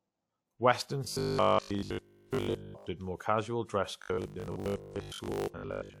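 Speech turns into a rigid, metallic buzz from 1.05 to 2.87 s and again from 4.02 s to the end of the clip, a robotic sound from repeated short buffers that tracks the original only loosely. The buzz sits at 50 Hz, which points to a 20 ms stretch being replayed over and over. The likely cause is audio arriving too seldom, so the last short buffer is looped in place of the real signal, which is mostly skipped.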